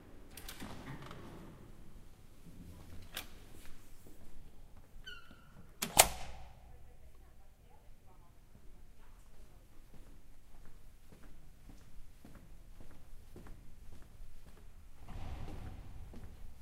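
No technical faults can be heard anywhere in the recording, and nothing in the signal chain calls for attention.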